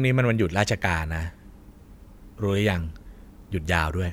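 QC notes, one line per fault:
Nothing to flag here; the speech comes across with no problems worth noting.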